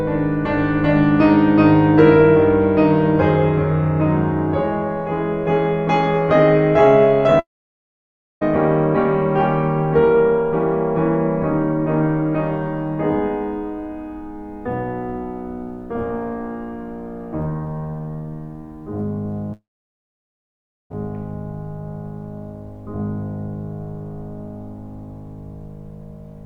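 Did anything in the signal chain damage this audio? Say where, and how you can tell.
Yes. The network stage is the likely cause: a long network dropout happened twice, with no audio arriving for about 1.0 s from 7.39 to 8.43 s and about 1.4 s from 19.53 to 20.92 s. Each time the receiver briefly extends the last music as a fading buzz, then leaves about 0.96 s and 1.29 s of near-silence. The music then resumes further on, and what was played during each gap never comes back.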